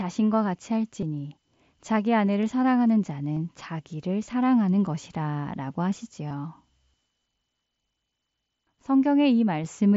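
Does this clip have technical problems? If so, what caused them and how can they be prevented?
Yes. Concealed Bluetooth headset packet loss at 1.01, 2.26, 3.35 and 6.28 to 6.31 s: lost headset packets, about 7.5 to 37.5 ms each, were patched by repeating matching recent waveform, the single loss nearly hidden and the longer runs leaving brief buzzy smears. Keeping the headset close to the phone, with a clear line of sight and away from crowded 2.4 GHz Wi-Fi, would prevent these dropouts.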